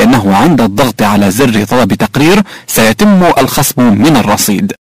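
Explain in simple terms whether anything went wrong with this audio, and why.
Hard clipping runs through the whole clip, from start to end. The sound was pushed far louder than the recording stage could hold, so its peaks were sliced off flat, nearly a third of the time. Those flattened tops produce a harsh, buzzing fuzz on every loud moment.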